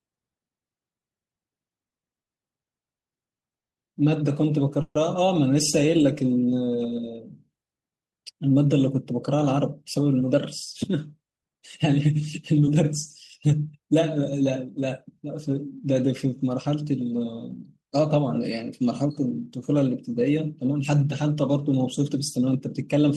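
From 1.89 to 3.75 s the speech shows repeated stalls (stutter): seven separate hitches in under two seconds, where the receiver's jitter buffer kept running dry and it stretched the last sound to cover each wait. About 360 ms is filled this way, roughly a fifth of that stretch, with the longest hold at 150 ms. Nothing is lost, but the delivery limps. The gaps come in a cluster of short holds rather than as a single break.

At 4.81 s a single call audio freeze lasts about 140 ms. The last sound is drawn out and fades, ending in about 10 ms of silence just before 4.96 s, and then the speech resumes exactly where it stopped. The likely cause is a burst of packets held up in the network, which pushes playback back by those 140 ms. It is one isolated pause, unlike the chain of hitches just before it.

From 5.86 to 6.77 s a jitter buffer slow-down stretches the speech to about 88% of normal speed by repeating single pitch periods, adding 113 ms to build reserve in the buffer. 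Sounds are drawn out, but the pitch does not drop. This keeps it distinct from a tape-style slow-down, and the absence of any pause keeps it distinct from the freeze.

Two jitter buffer speed-ups then shorten the audio by cutting out pitch-period-sized slices to shed surplus buffered delay. From 8.49 to 13.70 s the speech runs at about 107% and loses around 0.4 s. From 22.21 to 22.88 s it runs at about 105% and loses a few tens of milliseconds. Both sound hurried yet keep their pitch, so a resampling error would not explain them.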